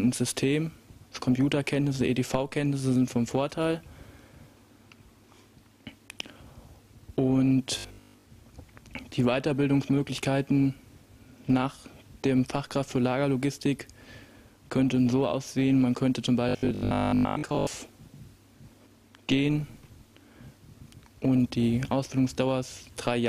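Two stretches of the audio turn robotic, from 7.79 to 8.25 s and from 16.49 to 17.67 s. The sound becomes a rigid, metallic buzz at 50 Hz that only loosely follows the underlying audio. This is robotic sound from repeated short buffers. The likely cause is new audio arriving too late, so a 20 ms chunk is replayed to fill the gap. Most of each stretch is these repeats, and their steady cycle imposes the fixed 50 Hz pitch.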